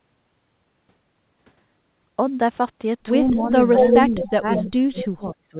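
From 3.33 to 3.53 s the speech dips by about 10 dB. This is speech suppressed in double talk: with both sides talking at once, the echo canceller likely failed to tell the near talker from loudspeaker echo and turned everything down. From 3.76 to 4.26 s a copy of the voice returns about 216 ms late at roughly the same level as the speech. This is an echo leak, likely where a loudspeaker's echo canceller let part of its microphone pickup back into the call. From 4.05 to 5.58 s the suppression returns much harder, with the speech pulled down by as much as about 35 dB. Within that stretch the same 216 ms echo leaks through again at 4.56 to 4.70 s and at 5.00 to 5.06 s, now about 10 dB below the speech, heard as short scraps inside the narrowband call audio, which stops at 4 kHz.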